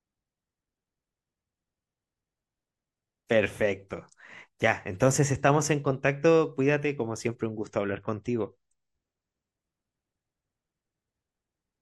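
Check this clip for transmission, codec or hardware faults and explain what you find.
One transmission fault stands out, from 7.48 to 9.48 s: an adaptive stream at a lower bitrate. The player dropped to a cheaper rendition, which sounds like a fall from about 128 kbit/s MP3 to about 32 kbit/s, then switched back. For those two seconds the speech loses everything above 8.3 kHz and turns duller and more smeared, with the change hitting abruptly and without any gap.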